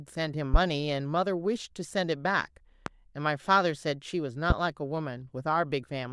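A speech recording hit by a brief voltage step or pulse in the signal chain, most likely from a plug, a switch, static discharge or a driver glitch, at three points: 0.54 s, 2.86 s and 4.50 s. Each one produces a single loud pop lasting about 36 ms, peaking around 20 dB above the speech at the first and last and around 15 dB at the second. The talking continues underneath each pop without a break.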